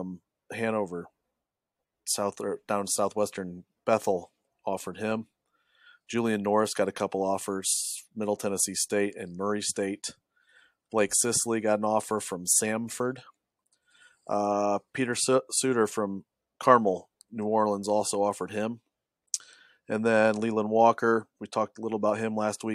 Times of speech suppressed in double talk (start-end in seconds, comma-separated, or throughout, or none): none